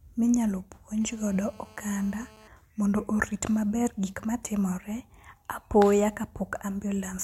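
A nearby 2G handset on a call pulsed its transmitter about 217 times a second, and the audio circuitry rectified those radio bursts into the signal path. The result is GSM phone buzz from 1.01 to 2.48 s, a hard, raspy 217 Hz tone rich in harmonics, unrelated to the speech, holding steady at about 27 dB below it, then stopping just before "mondo orit maber gik".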